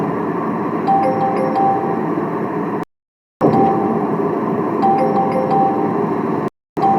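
The audio drops to silence from 2.83 to 3.42 s and again from 6.48 to 6.78 s, resuming each time later in the sound. These are digital broadcast dropouts: the receiver lost good frames and muted, so the roughly 0.58 s and 0.29 s sent meanwhile are gone.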